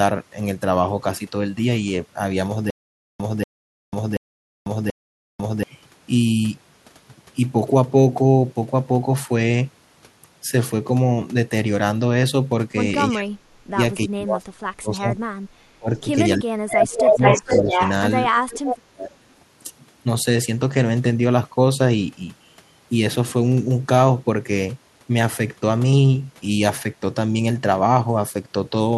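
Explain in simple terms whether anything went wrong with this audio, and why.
Yes, three kinds of problem can be heard.

From 2.70 to 5.63 s there is a stutter with silent gaps. A 0.24 s scrap of sound plays, then dead silence of about half a second, repeating every 0.73 s, four times in all. This is likely the playback stalling and replaying its last piece. Unlike a simple dropout, the same fragment keeps coming back.

Speech suppressed in double talk happens at 13.10–13.79, 14.07–15.18, 15.79–16.06, 16.37–17.80 and 18.49–19.33 s. The voice sinks sharply or breaks up, likely because an echo canceller turned it down while both sides spoke. The sound disappears rather than being doubled.

An echo leak appears at 16.98–17.91 s and briefly at 18.66–18.77 s. A copy of the voice comes back about 0.46 s late, the first time louder than the talker, the second time fainter. This is likely loudspeaker sound that slipped past the echo canceller. 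Here something extra is added, rather than sound being taken away.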